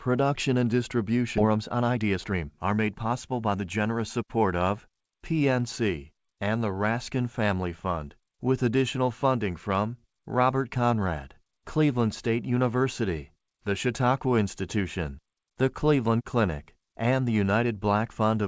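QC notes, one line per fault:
1.38–1.40 s, skip ahead: playback leaps forward with no fill at all. About a second of speech is simply gone, and the audio before and after the cut is butted together almost directly. This happens when a stretch is lost in transit or discarded by an overflowing jitter buffer while later audio is already queued, so the timeline jumps rather than pausing.
1.41–3.77 s, jitter buffer speed-up: right after the jump, the speech runs about 117% fast at unchanged pitch, so it sounds hurried up to "support of". The receiver was holding more audio than its target and trimmed it by repeatedly cutting out short pieces one or a few pitch periods long, removing about 0.4 s in total. The call path's usual band limit, with nothing above 8 kHz, fits a wideband call codec.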